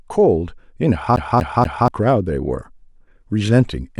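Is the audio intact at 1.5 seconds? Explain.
No. A CD stuck on one turn runs from 1.16 to 1.88 s: the laser jumps back one track on each revolution, so the same 240 ms stretch of speech repeats three times, each with a brief mute at the jump, giving a fast, even stutter.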